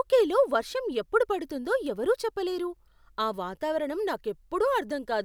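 A speech recording with one electrical switching spike at 1.87 s: a sharp snap, over in about a millisecond, sitting on top of the voice rather than replacing it. It's fairly low, peaking somewhere around -30 dBFS, so it's a small tick rather than a loud crack. The likely cause is a nearby switch, motor or static discharge arcing briefly, with the audio line picking up that burst as an added click.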